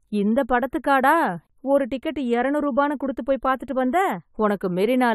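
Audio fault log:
throughout channel delay (comb filtering). One channel lags the other by a fraction of a millisecond, a few samples. Summed to mono, the speech loses energy in evenly spaced notches, the first near 5 kHz. It sounds hollow and phasey.
throughout generation loss. The speech sounds swirly and smeared, with softened consonant attacks and nothing above 19.2 kHz. The likely cause is around five rounds of AAC-LC coding at what sounds like 96 kbit/s, with each pass adding fresh quantisation noise and gaps.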